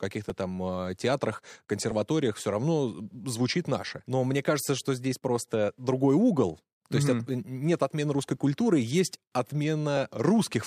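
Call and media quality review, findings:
Clock drift buffer slips: clicks every 1.62 s, 0.30–9.97 s, about seven; likely mismatched device clocks dropping/repeating small sample blocks; spectrogram vertical lines, waveform steps.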